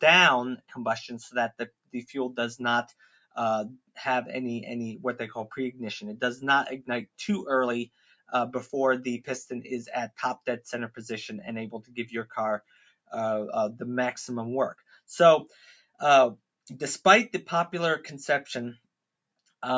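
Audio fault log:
Throughout: noise suppressor applied to music or sounds. A suppressor tuned for voice is running over the whole thing and keeps treating sustained tones and ambience as noise. The level quietly breathes up and down by roughly 5 dB, so held parts and tails sink while attacks poke through. That gives a pumping, thinned-out feel. The call's mic chain is also in the path, topping out around 8 kHz with the lowest bass trimmed, but that's expected.
1.51–1.94 s, 2.88–3.36 s, 7.86–8.32 s, 11.82–11.97 s, 12.6–13.12 s, 14.75–15.0 s, 15.48–16.0 s: sound cut by the noise suppressor. In each of these stretches the suppressor decides what's playing is noise and clamps down hard. The deepest drops are about 21 dB at 1.51 s, about 19 dB at 2.88 s and 12.6 s, about 18 dB at 7.86 s, about 17 dB at 15.48 s, and a milder about 14 dB and 13 dB at 11.82 s and 14.75 s. Each dip affects roughly 150 to 400 milliseconds, so you hear the sound sag or its decay get chopped short before it recovers.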